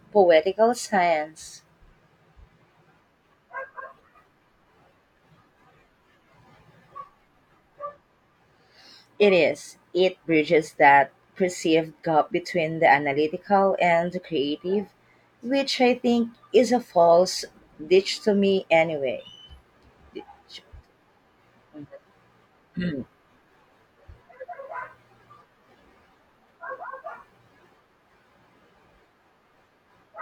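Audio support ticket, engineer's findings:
Listened through the whole speech recording and found nothing to flag, so no findings to log on this ticket.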